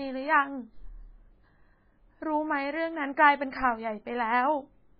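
It's a speech recording, and the whole thing carries heavy MP3 compression damage. Nothing comes through above about 5 kHz, so the top end is simply chopped off and the s sounds go dull and lispy. The rest has that watery, swirly quality you get when weak frequency detail blinks in and out from frame to frame, and consonant attacks smear. That level of damage points to a very low bitrate, likely somewhere around 16 kbps.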